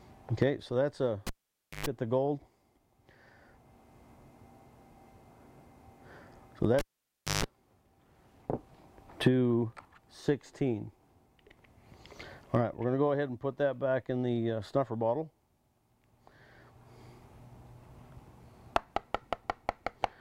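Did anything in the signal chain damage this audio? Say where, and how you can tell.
Yes, in the analogue wiring: a cable pulled and plugged in at 1.27–1.86 s and 6.79–7.44 s. Pops, near silence, then 50 Hz buzz on reconnection distinguish it from a digital dropout.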